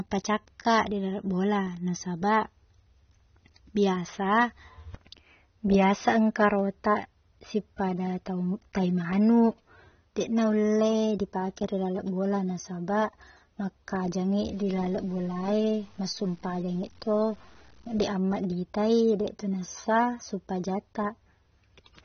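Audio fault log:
throughout AAC compression: The speech sounds dull and smeared across the whole clip. Nothing is present above 6.3 kHz, so the top of the spectrum is simply cut away. Sibilants lose their edge and turn fizzy. Sustained sounds warble as the encoder drops and refills spectral bands. The damage is plainly audible. The likely cause is AAC-LC running short of bits, and the sound points to a low bitrate of around 24 kbps.
14.42–18.03 s low bit depth without dither: For these few seconds a grainy distortion rides on the speech. It is most noticeable where the signal is quiet, and it moves with the sound rather than sitting steady like hiss. The error sits roughly 35 dB below the speech. The likely cause is samples cut to too few levels by plain truncation, with no dither to loosen the link to the signal. The grain fits 9-bit truncation.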